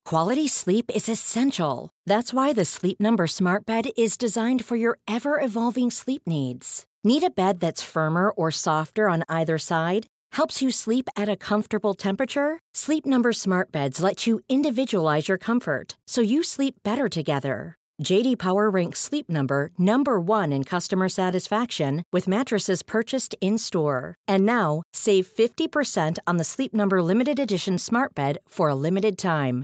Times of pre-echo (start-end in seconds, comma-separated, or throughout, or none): none